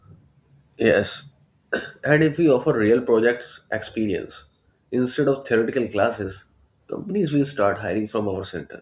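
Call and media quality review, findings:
No call or media quality findings to report for this speech recording.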